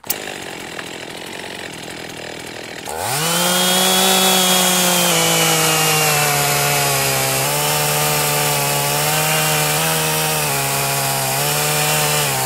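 Clock-matching software likely stepped the playback rate to correct drift in its buffer, a drift correction step: from 1.12 to 1.63 s the sound runs 6.5% fast, about a semitone sharp, then from 5.11 to 7.45 s 6.5% slow, about a semitone flat, before snapping back.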